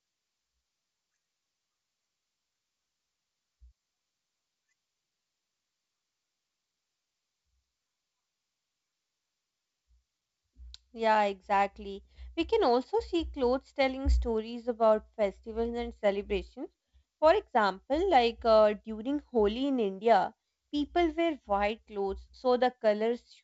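No technical faults are audible.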